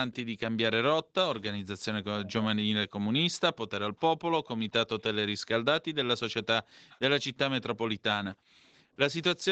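A speech clip recorded through call microphone processing, with nothing above 8 kHz. The background gated by the echo canceller shows up five times. The room sound drops out at 0.23 to 0.4 s, 1.03 to 1.14 s, 6.63 to 6.9 s and 8.36 to 8.65 s, each by about 40 dB. At 8.82 to 8.97 s it dips by about 25 dB. Each gap is short, a few tenths of a second at most. The canceller clamps the microphone while the far side plays, then releases it. There is also an echo leak. A faint delayed copy of the speech appears at 2.25 to 2.33 s, lagging about 295 ms behind. A fainter copy follows at 6.9 to 6.98 s, just as a gate releases. The likely cause is a loudspeaker on one side whose echo canceller let part of the playback through and sent it back.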